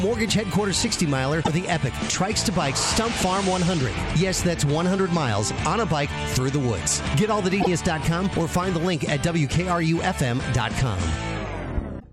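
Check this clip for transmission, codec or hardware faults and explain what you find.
Two kinds of fault are present: three bursts of damaged data in a compressed stream and one loud pop.

Damaged data in a compressed stream occurs at 1.41–1.49 s, 7.57–7.67 s and 11.97–12.04 s. Corrupted bytes make the decoder misread frames and hunt for the next header, giving a brief glitch in the audio. Unlike a pop, the audio itself is broken rather than overlaid.

A loud pop sits at 11.77–11.81 s, a single sharp transient about 10 dB above the surrounding sound, likely from a voltage step such as a switch or driver glitch. The sound carries on intact beneath it, which separates it from the stream damage that follows.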